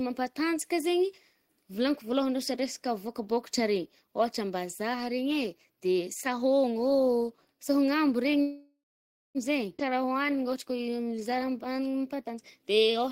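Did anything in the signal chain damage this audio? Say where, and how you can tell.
Yes. Call audio freeze, network and jitter-buffer stage: from 8.41 to 9.38 s the last sound continues as a fading buzz, then goes silent for its final 0.54 s. About 0.94 s is inserted. A spectrogram shows a smeared, steady band dissolving into blankness. Packets were likely held up in transit.

Skip ahead, network or jitter buffer: at 9.77 to 9.82 s playback jumps forward. Roughly half a second of speech is gone, joined almost directly with only a tiny fill. The waveform shows an abrupt splice where the envelope changes discontinuously, with no gap.

Jitter buffer slow-down: from 9.89 to 13.06 s the speech runs at 90% speed with pitch unchanged, adding 0.32 s. Repeated pitch periods stretch the audio to rebuild its reserve. On a spectrogram, harmonic spacing stays fixed while formant transitions are drawn out.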